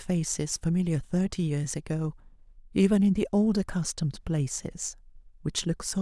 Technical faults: none

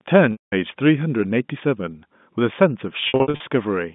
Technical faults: packet loss with pitch repetition

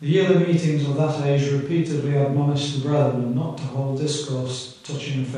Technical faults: none

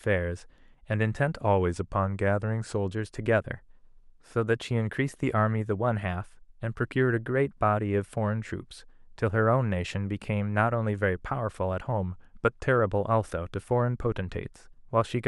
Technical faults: drift correction step

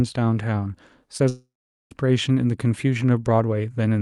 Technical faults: short concealed packet loss; long network dropout

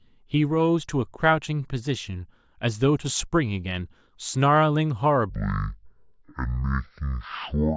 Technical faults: wrong sample rate

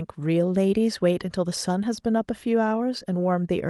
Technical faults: none

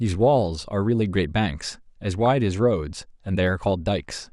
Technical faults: MP2 compression; DAB burbling

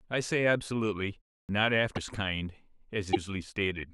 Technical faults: clipped start after a pause; broken MP3 bit reservoir

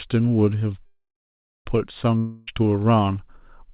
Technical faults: call audio freeze; long network dropout

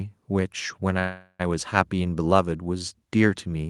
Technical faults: call audio freeze

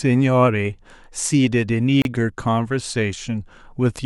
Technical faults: gap at a join of encoded pieces

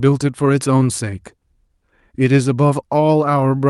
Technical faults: clock drift between sender and receiver; repeated timing corrections

